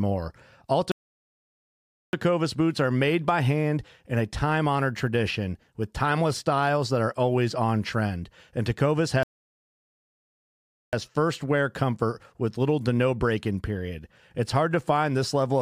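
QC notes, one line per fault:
0.92–2.13 s and 9.23–10.93 s, playback stall: the speech cuts off mid-flow into dead silence for 1.2 s, then 1.7 s, resuming at "boots are made by" and "first wear comfort with", likely from the player running out of buffered data. The waveform shows flat, near-silent gaps, and the spectrogram shows blank vertical bands.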